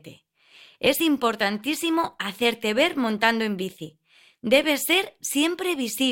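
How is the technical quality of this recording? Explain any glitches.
No glitches or faults detected.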